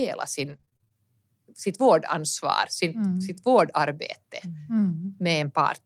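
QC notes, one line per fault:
0.41–0.96 s, repeated packet loss (robotic sound): choppy stretch with short holes, the longest about 27 ms, and roughly a third of the span patched. Audio kept dropping out, and the decoder stretched the last sound across each hole, with only around 70 ms rebuilt.
1.85–1.87 s, lost packet rebuilt from error correction: a brief 20 ms patch that sounds rougher and noisier, with no gap. This points to a single lost packet replaced by the low-bitrate copy carried in the following one.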